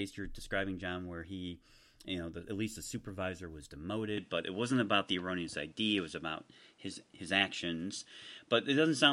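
At 4.17 s the recording likely switched its input to a poorer device, and the speech stays on that path until the end. The new input passes nothing above about 10.6 kHz, so the top of the speech band is cut and the sound turns duller from that moment. The change happens without any gap. The level shifts by a few decibels, and a faint new background noise appears, sitting well below the speech.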